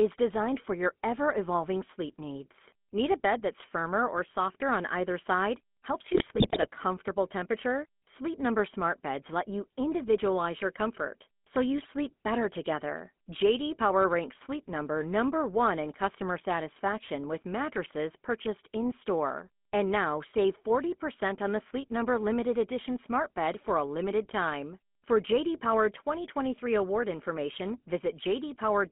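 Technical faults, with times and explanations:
Throughout, GSM full-rate codec: the speech passes through a vocal-tract model driven by evenly spaced pulses, which leaves a buzzy, gravelly roughness on every syllable and nothing above about 3.4 kHz. The roughness is steady and constant, unlike the sudden bursts of bit errors.
6.14 to 6.67 s, GSM bit errors: corrupted filter, pitch and gain values make the decoder produce squawks, pops and gargling that come and go abruptly. The bursts are brief and sit above the steady codec buzz, which points to a weak radio link rather than to the coding itself.
11.82 to 12.10 s, GSM bit errors: a second, shorter and milder burst of the same kind, where a few damaged frames give brief pops and a warped, gargled spectrum. It is shorter and lighter than the first burst, which fits a lower error rate.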